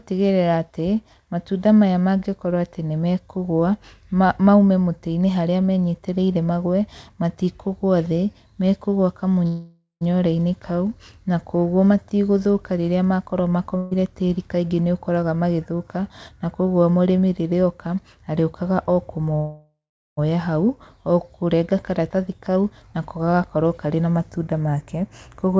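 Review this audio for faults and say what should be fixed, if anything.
Call audio freezes at 9.47 to 10.04 s and 19.36 to 20.20 s: packets were likely held up in transit until the jitter buffer ran dry. The receiver stretches the last sound into a fading buzz or hiss, about 535 ms in the first case and 814 ms in the second, which decays into silence for roughly 130 ms and 390 ms respectively. The speech then picks up exactly where it stopped, so a pause is inserted but nothing is lost. To prevent this, fix the network path's delay spikes or allow a deeper jitter buffer.

A burst of packet loss at 13.77 to 13.94 s means consecutive packets never arrived or came too late to play. The receiver covers the hole by holding the last sound for about 142 ms as a dimming buzz or hiss. Playback then resumes 200 ms further into the speech, so that stretch is missing and the timing jumps. Adding forward error correction or redundancy to the stream would let the receiver rebuild short bursts like this.

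Jitter buffer speed-ups run at 15.22 to 16.55 s and 21.63 to 25.53 s. The buffer holds more audio than it targets, so the receiver repeatedly removes short pitch-period slices to drain it. The speech plays at about 108% speed with unchanged pitch, sounding hurried, and roughly a tenth of a second disappears in the first stretch and about 0.3 s in the second. Eliminating the upstream delay spikes removes the backlog that forces this catch-up.

Throughout, nothing is heard above 8 kHz, which fits G.722 at 64 kbps on the call path.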